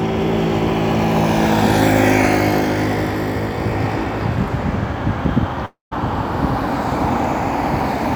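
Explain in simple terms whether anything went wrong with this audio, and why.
At 5.65 s the audio cuts out until 5.93 s, a likely long network dropout. The last sound smears into a fading buzz, then goes silent, and resumes with about a quarter second missing. A brief glitch would be a tick; this gap is much longer.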